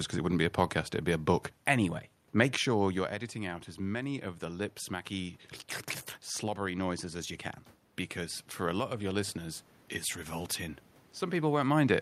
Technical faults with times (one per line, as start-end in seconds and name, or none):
3.32-5.42 automatic gain rising